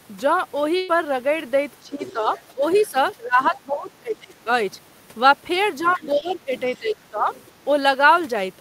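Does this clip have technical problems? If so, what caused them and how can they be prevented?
Yes. A burst of packet loss hits at 0.77 to 0.90 s. The receiver stretches the last sound for about 110 ms while fading it, then resumes about 120 ms further on, so a piece of the speech is skipped. Better jitter buffering or forward error correction would prevent it.

Speech suppressed in double talk appears from 1.82 to 4.48 s and 5.83 to 7.28 s. The talker's level dips by up to about 15 dB, for roughly a second and a half and then a second in all, most likely because the echo canceller couldn't separate the two talkers and turned both down. A headset or a double-talk-capable echo canceller would prevent it.

The other side's voice leaks through at 2.03 to 3.09 s and 5.82 to 6.79 s, about 20 dB below the talker, and briefly at 7.34 to 7.44 s, about 30 dB below. This is likely loudspeaker sound reaching the microphone that the echo canceller didn't fully remove. 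Using headphones or retuning the echo canceller would stop it.

A short concealed packet loss falls at 6.20 to 6.23 s. About 20 ms went missing, and roughly 10 ms was filled by continuing the previous sound before blending back, leaving a brief smear. A steadier network path or a larger jitter buffer would prevent it.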